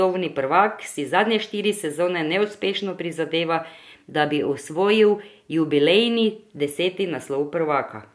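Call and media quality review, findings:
No audible faults found in this speech recording.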